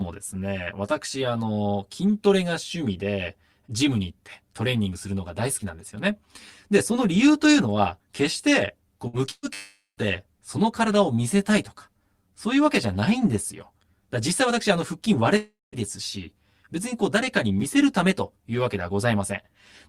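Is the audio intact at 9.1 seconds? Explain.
No. From 9.07 to 9.16 s the sound freezes into a stretched, fading tail, then resumes with about 60 ms skipped. This is a burst of packet loss, where the receiver concealed the missing data by extending and attenuating the last audio.

The speech there also sounds hollow and phasey. This comes from channel delay (comb filtering): one channel lags by roughly 10 ms, so summing to mono cuts evenly spaced notches starting near 50 Hz.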